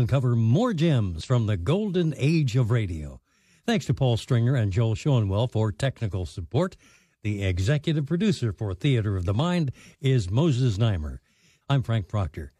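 A short glitch breaks into this speech recording at 1.21 s, just before "from the golden age". It is damaged data in a compressed stream: corrupted bytes made the decoder misread a frame, lose sync and skip ahead to the next valid header.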